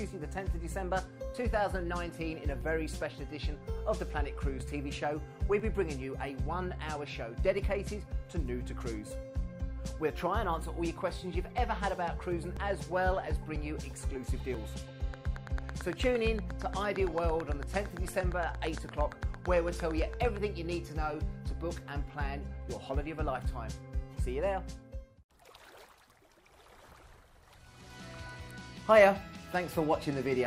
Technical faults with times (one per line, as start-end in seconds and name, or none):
2.61 overlap between stream segments
4.60 overlap between stream segments
5.60 overlap between stream segments
7.59 overlap between stream segments
11.58 overlap between stream segments
12.57 overlap between stream segments
13.56 overlap between stream segments
14.54 overlap between stream segments
15.14-20.38 train of clicks